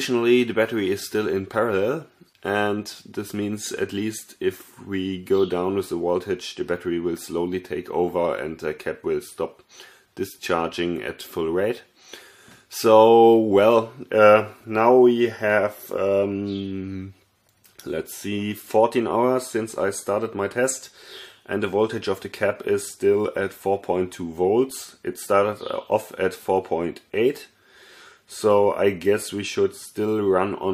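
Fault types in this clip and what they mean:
No technical faults are audible anywhere in the clip.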